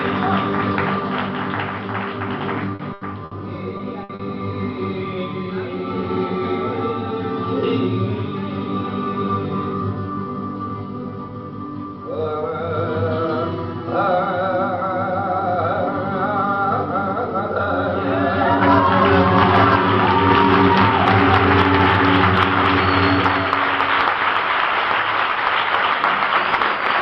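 At 2.75 s there is a short concealed packet loss. About 40 ms of audio never arrived in time. The receiver bridged the hole by extending the sound just before it, then blended back in. It comes across as a brief smear. From 2.93 to 3.03 s a burst of packet loss follows. About 80 ms went missing in a row. The receiver kept the last sound going and faded it. The result is a held, dimming tail. Then the audio jumps ahead with that stretch gone. A second burst runs from 3.25 to 3.33 s, covering about 60 ms, with the same fading hold and skip. At 3.77 s another short concealed loss fills about 20 ms. It is just a quick wobble. A third burst, from 4.03 to 4.11 s, drops about 60 ms. It is followed at 4.15 s by a short concealed loss of about 40 ms. Together these make the stretch from 2.75 to 4.21 s sound choppy and smeared.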